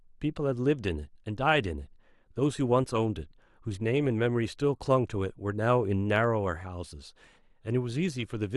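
Speech with a faint, fast rattle of ticks from 0.14 s to the end at 8.56 s, one roughly every 40 ms, most audible on louder sounds. These are clock slip clicks, likely from unsynchronised device clocks drifting apart by around 500 ppm, so that a single sample is dropped or repeated each time.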